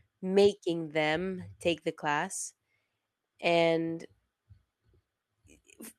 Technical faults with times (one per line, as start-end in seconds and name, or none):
none